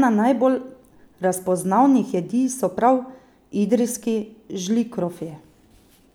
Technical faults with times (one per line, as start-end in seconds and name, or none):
none